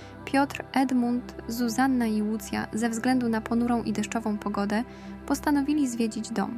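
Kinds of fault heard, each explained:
No technical fault can be heard in this audio. There is nothing here to explain.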